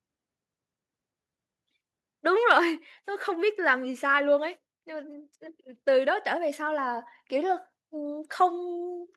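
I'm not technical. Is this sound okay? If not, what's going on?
No. Between 2.50 and 2.58 seconds there is microphone overload: the loudest moment briefly turns harsh and crackly because its tops are flattened. The likely cause is a microphone input set too high, so a small share of the peaks hit the recording limit.

At 2.58 seconds, right after that crackle, the microphone volume stepped down. Both speech and background suddenly become slightly quieter and stay that way. This is likely the call software reacting to the overload by turning the microphone's input level down in one jump.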